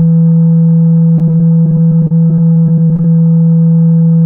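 From about 1.16 s to 3.05 s the music breaks up with repeated packet loss, which gives it that robotic sound. Over that stretch the stream keeps dropping out in short bursts, a couple of dozen of them, the longest around 32 ms. Each hole gets papered over by stretching the last bit of audio, so roughly a fifth of the passage is patched-in filler. What you hear is choppy music with little bits missing.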